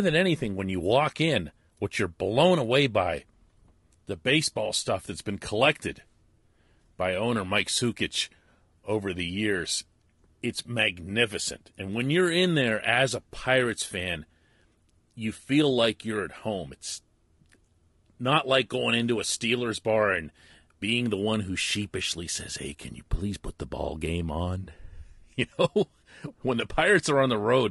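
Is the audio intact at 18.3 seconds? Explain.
No. At 18.3 s, as throughout the clip, the speech sounds rough and grainy, with noise between harmonics and an artificial top band, likely from low-delay AAC compression around 32 kbps.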